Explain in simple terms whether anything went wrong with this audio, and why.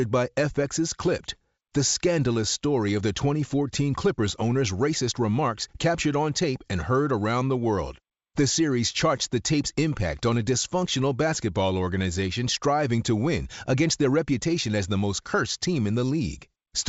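Nothing went wrong with this recording. The speech comes over a wideband telephone link using G.722 coding, which keeps it clear up to about 7 kHz, with at most a faint hiss in the higher frequencies.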